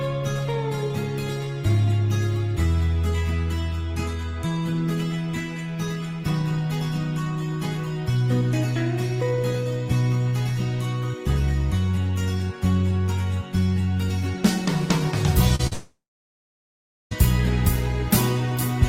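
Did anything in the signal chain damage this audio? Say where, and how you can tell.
Yes, the damage happened on the network. Two short concealed packet losses come at 15.55 to 15.61 s and 15.67 to 15.73 s, each a brief smear where about 40 ms of audio never arrived. The decoder extended the preceding sound to cover each gap, then blended back.

Right after the second gap, from 15.73 to 17.13 s, the extended sound fades out and about 1.1 s of silence follows. The audio then resumes without that stretch, which points to a long network dropout as the likely cause. Concealment cannot sustain a gap that long.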